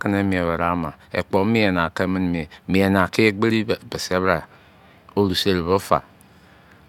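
No faults detected anywhere in the speech.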